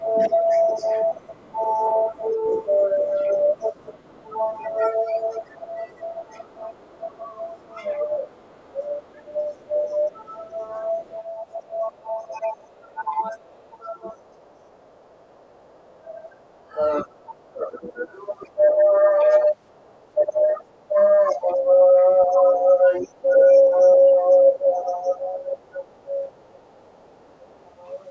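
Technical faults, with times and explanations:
0.0–27.03 s, speech suppressed in double talk: the main talker's level repeatedly dips, by as much as roughly 20 dB, for about ten seconds in total. The likely cause is an echo canceller that could not separate near speech from loudspeaker echo during overlap and attenuated both.
0.31–4.76 s and 6.32–27.58 s, other side's voice leaking through: a second, faint voice sits underneath, around 30 dB below the main speech in the first stretch and around 35 dB below in the second. This is likely loudspeaker playback that the echo canceller left in the microphone signal.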